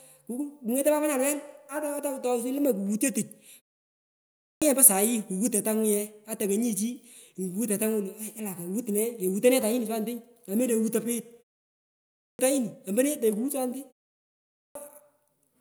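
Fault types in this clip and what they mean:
Clipped start after a pause: the output path drops into a low-power state during short gaps and is slow to resume, so speech begins abruptly from silence with its opening missing, about 0.63, 0.59 and 0.54 s lost at 3.99, 11.8 and 14.21 s.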